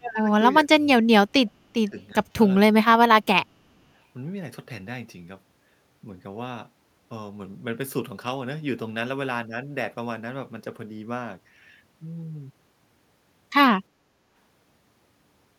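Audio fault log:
0.0–0.28 s, 0.64–2.15 s, 3.22–3.71 s, speech suppressed in double talk: the speech dips by roughly 20 to 25 dB, likely from an echo canceller muting both overlapping talkers.
2.32–2.35 s, repeated buffer: one short slice plays three extra times with hard joins, a brief buzzing stutter that fits a 10 ms buffer replayed after late audio.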